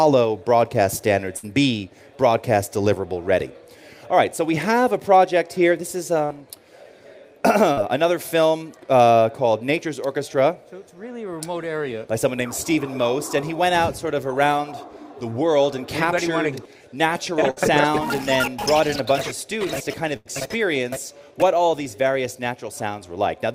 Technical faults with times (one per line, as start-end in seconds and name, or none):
1.37-1.45 burst of packet loss
6.25-6.30 short concealed packet loss
7.72-7.79 short concealed packet loss
17.51-17.58 burst of packet loss
20.16-20.27 burst of packet loss